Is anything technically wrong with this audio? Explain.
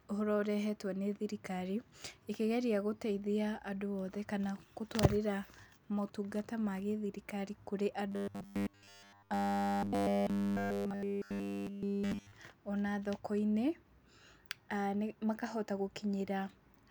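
Yes. From 8.12 to 12.32 s, right after "motungata ma gĩthirikari kũrĩ", the speech turns into robotic sound from repeated short buffers, likely because new audio arrived too slowly and a chunk of about 10 ms was looped throughout, imposing a fixed 100 Hz metallic buzz. Unlike ordinary dropouts or stutter, the sound turns rigid and follows the original speech only roughly.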